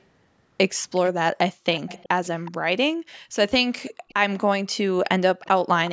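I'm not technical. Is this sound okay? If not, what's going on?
No. There are two problems.

Background gated by the echo canceller: the room sound suddenly drops away at 1.54–1.65 s, 2.96–3.35 s and 3.92–4.08 s. The call's echo control is briefly muting the microphone.

Echo leak: a faint, delayed copy of the speech comes back about 0.37 s late. It happens at 1.73–2.51 s, 3.14–3.19 s, 3.86–4.40 s and 5.41–5.48 s. It's likely loudspeaker sound the echo canceller failed to remove.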